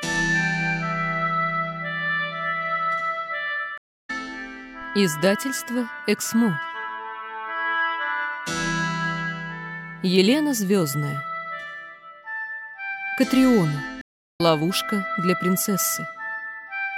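At 3.78 s and again at 14.01 s, a stream reconnect occurs. The connection drops and playback goes silent for 310 ms, then 378 ms. A fresh decoder restarts mid-stream. Each time, the sound resumes roughly 0.4 s further along, skipping material.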